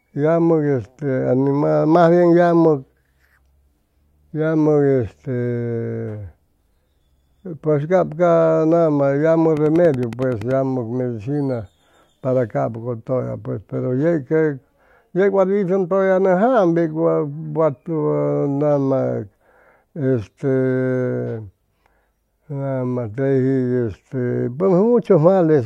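A train of clicks runs from 9.57 to 10.52 s in this speech recording: about ten sharp, near-identical pulses at a steady 10.6 clicks per second. They sit a little above the level of the speech itself, so they read as a distinct mechanical ticking laid over the sound rather than part of it. The even spacing and uniform shape point to something injecting a repeating pulse, likely electrical interference from nearby equipment or a faulty connection or power supply.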